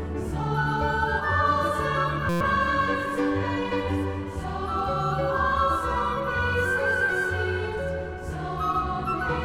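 At 2.29 s the sound locks into a system hang loop until 2.41 s. The driver or machine stalled while the hardware kept replaying its ring buffer, so one 5.8 ms slice, which fits a 256-sample buffer, repeats exactly 20 times. The result is a steady buzz at about 172 Hz rather than a gap. Unlike a dropout, nothing goes silent, and the audio resumes with essentially nothing skipped.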